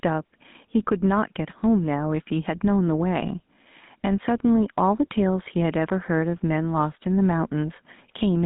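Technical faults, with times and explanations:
Throughout: gain pumping. The input gain is likely set far too high for the microphone, so a fast limiter or compressor clamps down each time the speech gets loud and lets go in the pauses. The level swings by about 5 dB. Loud and quiet passages sit unnaturally close together, giving the speech a squashed, breathing quality.
Throughout: GSM full-rate codec. The speech has passed through the original GSM coder, which models the vocal tract and drives that model with a sparse train of evenly spaced pulses, and the damage fits a 13 kbps full-rate link. The line band runs from roughly 150 Hz to 3.7 kHz, with nothing above 3.8 kHz, so the sound is thin and muffled. The coarse pulse excitation adds a plainly audible buzzy, gravelly roughness to the voice.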